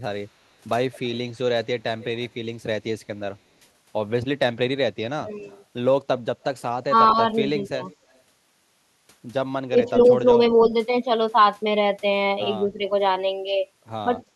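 From 0.94 to 2.25 s there's an echo leak: a faint copy of the speech trailing it by 213 ms, about 30 dB below the direct sound. It's most likely a far-end speakerphone whose echo canceller let some of its own loudspeaker pickup slip back down the line. The same 213 ms shadow, a touch quieter at about 35 dB down, comes back from 5.34 to 6.44 s and briefly from 7.67 to 7.96 s.

Overlapping that stretch, speech suppressed in double talk hits between 5.17 and 5.46 s. The talker ducks by up to about 25 dB for roughly a fifth of a second, which is likely the canceller failing to separate talker from echo while both sides spoke and pulling everything down. It happens again from 6.88 to 7.78 s (around 15 dB, shorter bites totalling about 150 ms), from 9.7 to 10.72 s (around 10 dB, about 100 ms in all), and very slightly at 12.77 to 12.85 s, a small dip of about 5 dB.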